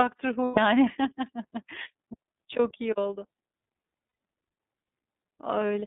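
Throughout, the speech passes through the iLBC codec, confined to about 200 Hz to 3.7 kHz, with clearly audible roughness and a faintly synthetic edge. That roughness separates it from a plain telephone band filter, and the coarse behaviour fits a 13.33 kbps mode with 30 ms frames.

From 0.45 to 0.58 s, and again from 4.07 to 4.16 s, lost iLBC frames leave 120 ms and 90 ms gaps. The decoder fills each by repeating the last pitch cycle with added noise, so the gap sounds like a held, buzzy vowel, which fits four and then three lost frames. Unlike a silent dropout, the gap is bridged, and unlike concealment in codecs that carry state between frames, the voice comes back almost at once.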